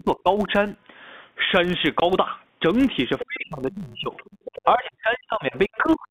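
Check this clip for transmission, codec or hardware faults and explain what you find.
Four faults are audible in the speech: a steady block-rate buzz, three stretches where the talker is pushed down during double talk, one silent dropout, and three scraps of the far-end voice leaking in.

Filter restarted on every block. A buzz at 100 Hz runs through the whole clip. It rises and falls with the speech level. A filter is losing its memory at each block boundary and restarting from zero. Each restart leaves a tiny transient. The repeat rate fits 10 ms blocks. Heard together, those transients form the buzz.

Speech suppressed in double talk. The talker is turned down from 0 to 0.48 s, from 3.23 to 4.13 s, and from 4.65 s to the end at 6.10 s. The first dip affects about a fifth of a second and drops about 25 dB. The later two each affect about a second and reach about 35 and about 40 dB. The likely cause is an echo canceller that could not tell the talker from the loudspeaker echo, and so suppressed both.

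Packet loss filled with silence. A hard gap runs from 2.00 to 2.02 s. It lasts 20 ms, which fits a single lost packet. The receiver played silence instead of concealing it. The sound stops and restarts abruptly.

Other side's voice leaking through. A second voice appears from 3.19 to 3.24 s, from 4.16 to 4.62 s, and from 5.54 to 5.96 s. It sits about 15, 20 and 25 dB below the talker, fading each time. Its likely source is loudspeaker playback reaching the microphone, which the echo canceller did not fully remove.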